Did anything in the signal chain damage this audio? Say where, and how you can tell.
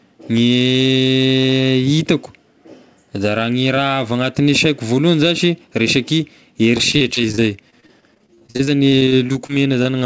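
Yes: repeated packet loss (robotic sound), 6.78 to 9.87 s, network stage; 28 gaps up to 41 ms, each patched by extending the last sound, leave choppy sound with pieces missing.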